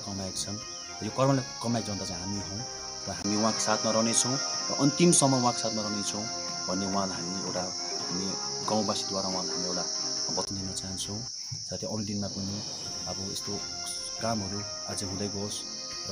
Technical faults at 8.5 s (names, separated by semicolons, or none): input switched to a poorer device